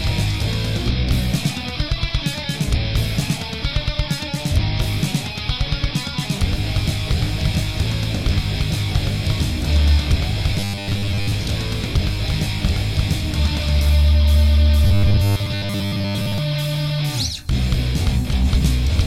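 Robotic sound from repeated short buffers appears at 10.54 to 11.34 s and 14.84 to 16.38 s, with a rigid 100 Hz buzz. Likely, 10 ms buffers looped while most of the audio was skipped.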